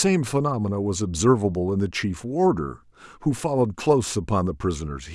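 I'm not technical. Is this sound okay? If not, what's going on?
Yes, this speech recording is technically sound, with nothing in the signal that points to a recording or playback problem.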